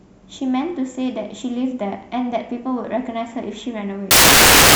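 Speech clip that plays cleanly until 4.11 s, where the final 0.65 s turns into loud, harsh broadband noise running to the end. The fault is samples built from the wrong bytes: the reader misassembles each sample's bytes, so the fast-changing low bits dominate and the signal becomes noise.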